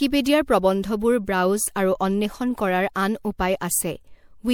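Throughout, the speech sounds swirly and hollow, with smeared, blurred consonant attacks and a watery, metallic haze. That points to generation loss, most likely from re-encoding with MP3 around four times, which fits a 96 kbit/s chain whose errors accumulate on each pass.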